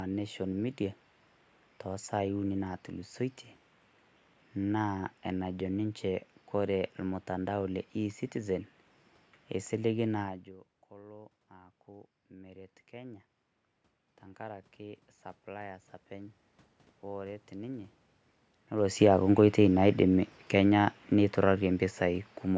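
A speech recording carries two automatic gain control errors, both triggered after the talker's level at the microphone shifted. Around 10 s the voice drops by about 21 dB as the talker moves away, and from 10.23 s to 18.0 s an automatic gain rising ramp slowly adds about 11 dB. Voice and room noise swell together, so the waveform envelope and the noise floor both climb steadily in the spectrogram, which is empty above 8 kHz from the call microphone processing. Around 18.5 s the talker comes closer again and the input level rises. From 18.86 s to 22.29 s automatic gain falling pulls the level down by about 5 dB, so the waveform peaks and the background band shrink together over those seconds instead of holding steady.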